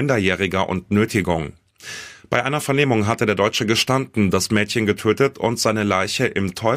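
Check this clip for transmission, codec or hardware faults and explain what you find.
No faults turn up anywhere in this speech recording. Nothing in the sound points to a problem that needs explaining.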